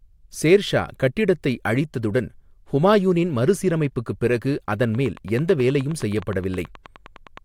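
Speech with a train of clicks from 4.73 to 7.38 s, after "அழித்ததுடன் ஹுமாயூனின் மறுசீரமைப்புக்குப் பிறகு". About thirty even ticks come at 9.4 per second, peaking about 5 dB above the speech, likely from electrical interference.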